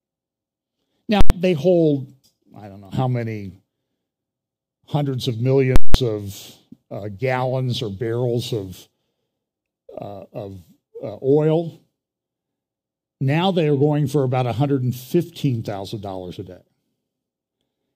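At 1.21 s and again at 5.76 s there is a loud pop, then silence, then another pop, lasting about 0.09 s and 0.19 s. This is invalid numbers at full scale: invalid or infinite values pinned the output to its extreme across blocks that fit 4096 and 8192 samples.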